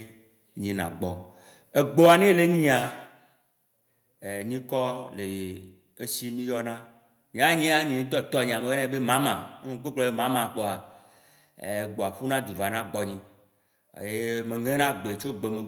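Input gain was likely set too high, causing microphone overload from 1.99 to 2.13 s: peaks drove about 6 dB past the converter's limit, flattening their tops into a harsh crackle. At 2.06 s the microphone volume was stepped down, likely by the call software reacting to that clipping, so the speech and background drop about 2 dB in one sudden step.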